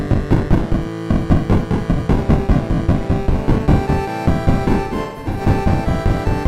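From the start, the whole clip carries a doubled audio track. A second full-band copy trails the original by roughly 200 ms at about the same level, with no decay or room colour, so everything sounds stuttered. The likely cause is a slower second capture path or an edit holding two copies out of step.

Then from 4.83 to 5.41 s there's AAC frame loss with concealment. Around 0.3 s of audio goes missing in bits scattered across that half-second, which points to roughly seven lost frames. The longest gap is around 150 ms. The decoder patches the holes from the last good spectrum, so that stretch turns smeared, noisy and a bit phasey.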